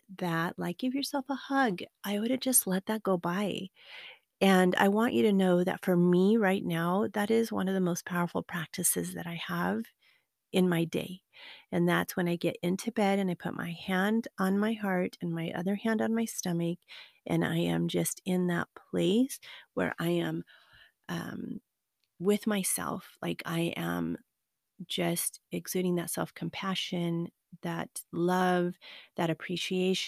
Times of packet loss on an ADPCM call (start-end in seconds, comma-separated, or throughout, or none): none